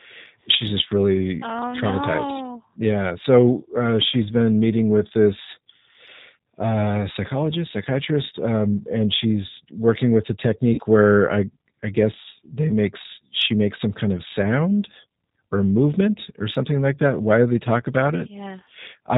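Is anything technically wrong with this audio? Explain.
Yes. Throughout, a G.729 codec at 8 kbit/s rebuilds the speech from a vocal tract model and a few pulses per frame, cutting everything above 4 kHz and leaving it plainly rough and synthetic.

From 10.74 to 10.80 s, just after "she's working with a" and before "where I I guess", VoIP packet loss concealed by the speech codec drops about 40 ms of audio, which fits two lost packets. The decoder stretches its last frame into a fading buzzy tone or coloured noise.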